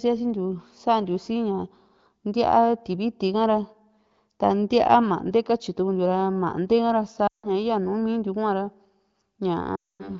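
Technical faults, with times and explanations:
7.27 to 7.52 s and 9.75 to 10.11 s, lost AMR speech frames: the speech drops within two frames to near silence, then returns weak and rough. After the wideband frames failed their checks, the decoder repeated the last good pitch and vocal-tract settings at falling gain. The gaps of 160 ms and 240 ms fit runs of about eight and twelve 20 ms frames.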